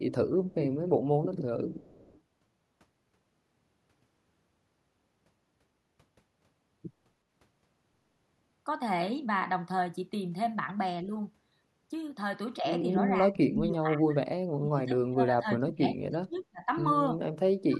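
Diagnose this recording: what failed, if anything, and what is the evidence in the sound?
Call processing: the far end's echo canceller likely let part of its loudspeaker pickup through. A faint delayed copy of the speech, about 30 to 35 dB down and trailing by 321 ms, surfaces in short scraps of echo leak at 0.50–0.55 s, 1.80–2.21 s and 16.37–16.43 s.

Call processing: with both sides talking, the canceller likely mistook this talker for echo and attenuated it, giving speech suppressed in double talk. The speech dips or drops out at 11.04–11.11 s, 13.24–14.20 s, 14.57–16.68 s and 17.68–17.75 s, from a slight sag to roughly 30 dB.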